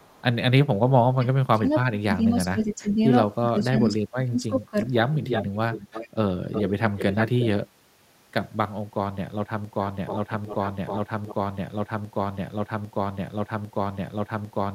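From 0.00 to 0.22 s a very faint delayed copy, about 35 dB down and 386 ms late, is likely an echo leak: residue from a loudspeaker that the echo canceller missed. On a spectrogram it shows as a weak, shifted duplicate of the speech harmonics.

Between 0.83 and 0.88 s the background is gated by the echo canceller. The room noise floor drops by about 17 dB for roughly 50 ms, a brief notch in the waveform's floor.

From 1.16 to 3.00 s and from 3.49 to 4.95 s the speech is suppressed in double talk, likely by the canceller clamping both talkers at once. The speech dips by up to about 25 dB in patches, totalling around 1.5 s and then 1 s, and the spectrogram shows faded or missing bands.

The echo leak returns from 5.13 to 6.09 s and from 6.52 to 7.48 s, now strong at about 5 dB below the speech and 360 ms late. Its overlapping, offset harmonic stripes are plainly visible.

From 9.65 s to the end, an 800 ms fragment repeats six times back to back, a broken-record loop likely caused by a stalled stream. 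It looks like identical, periodic blocks in the waveform.

Inside that loop, from 9.86 to 11.35 s, a further echo leak sits about 10 dB down and 310 ms late.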